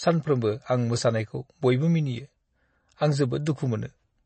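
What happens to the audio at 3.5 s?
Pre-echo appears at 3.46 s. The codec spreads quantisation noise across its whole transform block, so noise meant for a sharp attack leaks into the quiet just before it. About 12 ms of hiss arrives ahead of the onset, which sounds softened and smeared. Throughout the moment, the sound is also dull and watery, with nothing above 8.3 kHz and plainly audible swirling. This is likely MP3 compression at a starved bitrate, fitting roughly 32 kbps, which cuts the treble and switches weak frequency lines on and off between frames.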